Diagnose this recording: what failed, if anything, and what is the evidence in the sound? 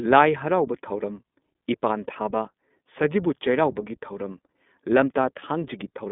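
The codec stage shows iLBC coding throughout the speech. The band is confined to roughly 200 Hz to 3.6 kHz, with plainly audible roughness and a synthetic edge. Each frame's excitation is coded independently, and the texture fits 20 ms frames at the 15.2 kbps mode.

On the network side, lost iLBC frames appear between 5.40 and 5.43 s as a brief held, slightly buzzy tone, which fits a single missing 20 ms frame. The decoder concealed the gap by repeating the last pitch cycle mixed with noise. Because frames decode independently, the speech recovers immediately afterward.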